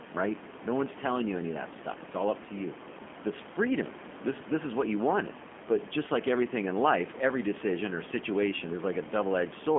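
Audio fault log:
Throughout: G.729 codec, heard as an 8 kbit/s pulse-and-filter rebuild of speech within a 200 Hz to 3.4 kHz line band, sounding plainly rough, synthetic and muffled.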